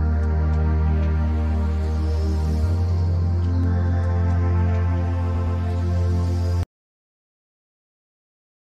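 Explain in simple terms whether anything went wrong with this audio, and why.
At 5.34 to 5.58 s the sound stutters, repeating the same brief 0.12-second snippet twice more. These are repeated frames: a stretch of compressed audio was stored again, adding about 0.23 s.

From 6.63 s to the end, the sound cuts to complete, dead silence. This audio dropout to silence was likely caused by the input being lost while recording continued.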